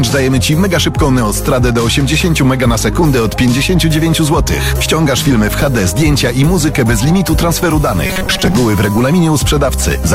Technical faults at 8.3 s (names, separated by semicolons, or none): robotic sound from repeated short buffers